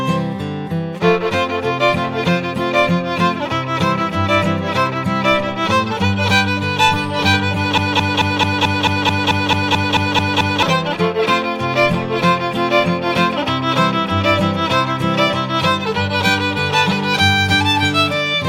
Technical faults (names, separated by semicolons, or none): broken-record loop